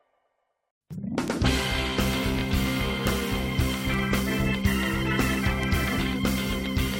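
At 1.28 s there is a bit error spike. A single flipped bit in stored or transmitted data throws a short run of about three samples far off their true value, then the signal snaps back. The result is one sharp, bright tick with no connection to the surrounding sound.

At 2.38 s a repeated frame appears, lasting until 2.40 s. One compressed block of about 23.2 ms was delivered twice. The decoder plays the same slice again, giving a tiny stutter. The audio runs 23.2 ms longer than it should.

Further bit error spikes land at 3.07 s, 3.94 s and 5.63 s. The first two each hit a single sample. The last spans about three. Each is the same isolated, broadband tick.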